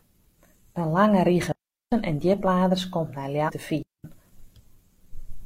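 At 1.52 s the speech cuts to near silence for about 0.40 s, ending at 1.92 s just before "en djipladers komt nei". This is a digital wireless dropout: the radio link lost too much data, so the receiver muted with a very quick fade instead of passing on corrupted audio. On a waveform it is a flat, near-empty gap with no noise spike at either edge. A spectrogram shows a clean vertical blank band across all frequencies.

At 3.44 s, right after "en djipladers komt nei", a short glitch of about 64 ms breaks in. This is damaged data in a compressed stream. Part of the encoded stream was corrupted, so the decoder misread the frames there, lost sync and had to hunt for the next valid frame header. On the waveform it shows as an abrupt discontinuity.

A second digital wireless dropout follows at 3.83 s. The sound again falls cleanly to near silence, this time for about 0.22 s, ending at 4.04 s. 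It has the same flat gap and sharp edges as the first, with no burst of noise before or after.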